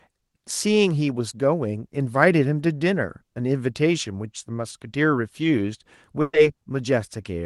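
Speech with a burst of packet loss at 6.21 to 6.35 s: 120 ms of fading concealment, a brief silence, then the audio jumps ahead.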